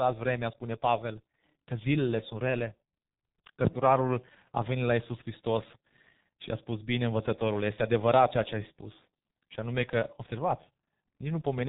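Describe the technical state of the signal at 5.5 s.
At 5.5 s the speech carries G.723.1 codec damage, as it does across the whole clip. Heavy coding has removed everything above 3.8 kHz. The codec works in long 30 ms frames and refreshes its vocal model slowly. Fast changes smear across frames. The speech sounds muffled and hoarse. Consonants blur into one another. The muffled, hoarse texture fits a low bitrate near 6 kbit/s.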